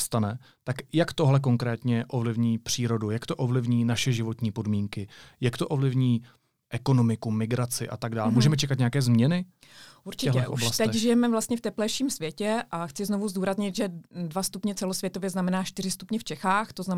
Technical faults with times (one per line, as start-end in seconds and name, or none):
none